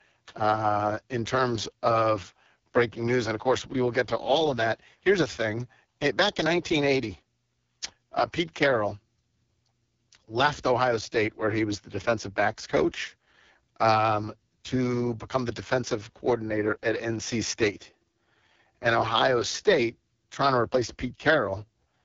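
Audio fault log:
throughout: AMR wideband (HD Voice) codec starved of bits, fitting its lowest 6.6 kbit/s mode, so speech turns rough and raspy, with nothing above 7.3 kHz.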